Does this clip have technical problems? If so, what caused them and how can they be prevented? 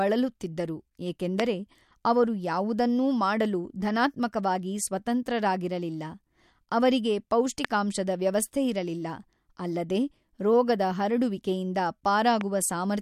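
Yes, there are three loud pops, each a single sharp thump lasting about 20 ms while the speech carries on underneath: 1.40 to 1.42 s, 7.65 to 7.67 s (right before "ವ್ಯವಸ್ಥೆಯಿರಲಿಲ್ಲ ಅಲ್ಲದೆ ರೋಗದ ಹರಡುವಿಕೆಯಿಂದ"), and 12.41 to 12.43 s. The first two jump roughly 20 dB above the speech and the last about 10 dB. Each is a brief voltage spike added to the signal and then shaped by the circuits after it, likely from a loose connector, switching, static or a driver hiccup. To prevent them, seat and secure the cables, avoid switching anything while recording, ground the setup properly, and keep the audio drivers up to date.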